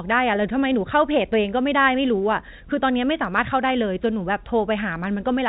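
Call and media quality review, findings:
Nothing to report: speech is carried over G.711 A-law telephone coding at 64 kbps, band-limited below 4 kHz, with at most a faint quantisation noise tracking the signal level.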